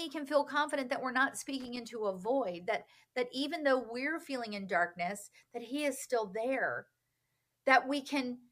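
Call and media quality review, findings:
Loose connector crackle, 1.60 to 1.77 s. Worn or dirty contact in the cable/jack path making and breaking intermittently; signal chopped on and off. Heard as irregular scratchy burst over the speech, roughly 0.17 s long.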